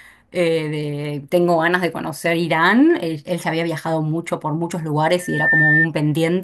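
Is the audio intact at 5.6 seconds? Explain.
No. A loudspeaker feedback squeal runs from 5.19 to 5.87 s: the microphone re-amplifies its own loudspeaker, and a 1.8 kHz tone swells over roughly a third of a second to about 5 dB above the speech. Unlike a steady interfering tone, it grows rather than starting at full level.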